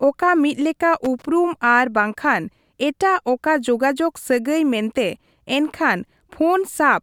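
A speech recording with a loose connector crackle from 1.04 to 1.25 s: a worn contact is making and breaking, chopping the signal into an irregular scratchy burst. The waveform shows jagged dropouts and spikes there, and the spectrogram shows scattered broadband vertical streaks.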